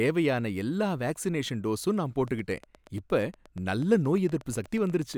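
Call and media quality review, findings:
Train of clicks, 2.28–5.15 s, after "எல்லா வேக்சினேஷன் டோசும் நான்". Regular ticking, 8.4 per second, around thirty, near speech level. Likely interference or a failing interface.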